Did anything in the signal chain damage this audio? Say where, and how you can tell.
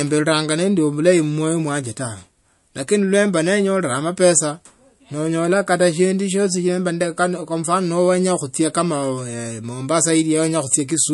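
Yes, at the codec stage: the speech carries plainly audible MP3 compression damage throughout, likely from a low-bitrate encode. Nothing survives above 11.3 kHz, and weak spectral detail swirls and chirps on s sounds as lines drop in and out between frames, which fits about 48 kbps.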